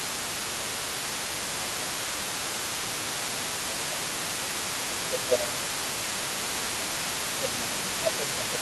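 Speech, with a second voice audible under the main talker for the whole clip and the main talker repeatedly pushed down during stretches where both sides overlap. The speech suppressed in double talk shows up at 0 to 0.69 s, 1.53 to 4.02 s, 4.7 to 6.87 s and 7.37 s to the end. In the first stretch, about half a second is affected, with a drop of roughly 10 dB. In the two middle stretches, around two seconds each is affected, dipping by about 15 dB. The last stretch also dips by about 15 dB. The pattern points to an echo canceller that likely could not tell the near talker from the loudspeaker return during overlap and attenuated both together. The other side's voice leaking through is present throughout, sitting roughly 15 dB below the main speech. It is residual far-end audio picked up by the microphone from the device's loudspeaker, likely left behind because the echo canceller removed only part of it.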